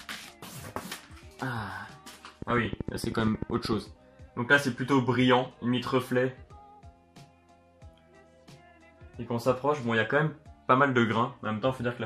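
From 2.42 to 3.74 s a train of clicks ticks over the sound: about twenty pulses of the same shape at a steady 13 per second, peaking roughly 10 dB above the signal, likely from interfering nearby equipment. Random crackle would be irregular and varied; these clicks keep an even spacing and shape.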